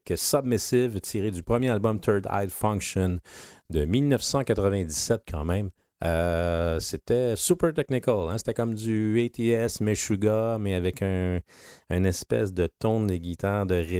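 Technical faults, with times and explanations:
Nothing stood out on listening to this speech recording.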